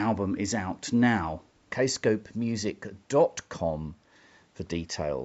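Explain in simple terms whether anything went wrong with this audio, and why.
Nothing went wrong with this recording. The speech went through the usual microphone processing of a call, which trims away the lowest bass and leaves nothing above about 8 kHz, and that is normal for a call.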